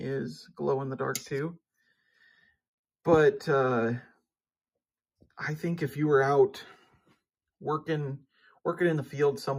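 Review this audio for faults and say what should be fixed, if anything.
No faults found; nothing needs fixing.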